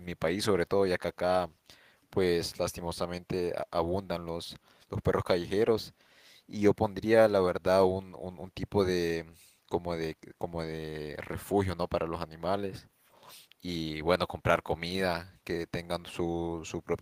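No technical faults can be heard in this recording.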